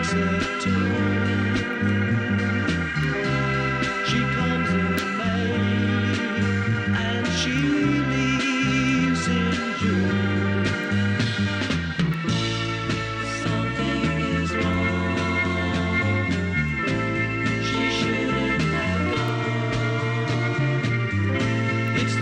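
From 0.43 s to 21.88 s, word clock ticks run through the sound. They are short, sharp clicks. They come at a steady pace, about every 0.7 seconds, around thirty in all. Their strength varies from tick to tick. The receiving device is running on its own clock, not locked to the sender's. The two clocks differ by roughly 30 ppm. Each time they slip past each other, one sample is dropped or repeated, and a tick results.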